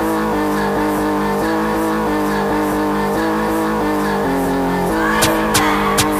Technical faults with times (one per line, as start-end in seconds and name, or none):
0.00-6.20 low bit depth without dither